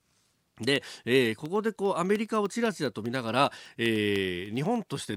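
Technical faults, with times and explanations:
0.06–5.06 s, periodic USB or driver dropouts: the speech carries a steady train of ticks every 0.1 s, about fifty in all, heard only under signal. A background task stalling the USB bus or driver at that fixed interval drops a sliver of audio, roughly a tenth of a millisecond, leaving a brief gap of silence each time.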